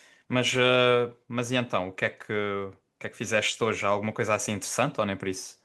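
Listening to the speech here, nothing stood out as a technical problem at any point.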